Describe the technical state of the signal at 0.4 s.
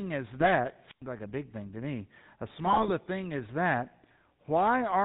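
At 0.4 s GSM bit errors begin and run to about 0.51 s. Corrupted bits reached the decoder and scrambled the filter, pitch and gain values over a span that fits a handful of 20 ms frames, so the sound breaks into squawking, gargling pops with sudden level jumps.

Underneath, the GSM full-rate codec is active throughout, at a quality that fits a 13 kbps full-rate stream. Its vocal-tract model is fed by sparse, regularly spaced excitation pulses and nothing passes above 4 kHz, so the speech has a plainly audible buzzy, gravelly roughness and a muffled top end.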